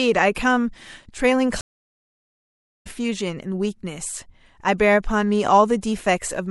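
A speech clip carrying two faults. Throughout, the sound turns watery and swirly. S sounds chirp metallically and attacks smear. This plainly audible damage is likely MP3 compression, at a rate that fits roughly 64 kbps. At 1.61 s a stream reconnect occurs. The audio drops to silence for 1.24 s, until 2.87 s. A fresh decoder then picks up mid-stream, so the sound resumes about a second and a half further on.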